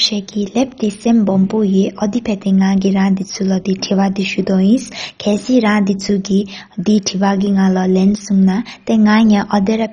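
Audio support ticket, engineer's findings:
Dull, gurgling, granular speech throughout, nothing above 10.4 kHz. Likely MP2 compression; heavy damage fits a very low bitrate around 32 kbps, starving the sub-bands so upper bands drop out and the rest are coarsely quantised. Spectrogram: hard ceiling at 10.4 kHz, blocky upper bands flickering on and off between frames, coarse, grainy energy below. Waveform: no obvious clipping or gaps.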